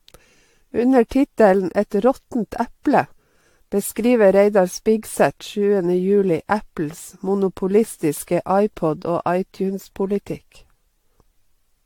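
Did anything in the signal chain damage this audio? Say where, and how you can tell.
Yes, at the codec stage. Throughout, the speech sounds swirly, smeared and hollow, with nothing above 18.7 kHz. This is likely generation loss from about seven AAC-LC re-encodes.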